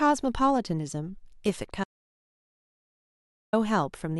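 Speech recording with an audio dropout to silence from 1.84 to 3.53 s: about 1.69 s of silence with no room tone, likely from input lost mid-recording.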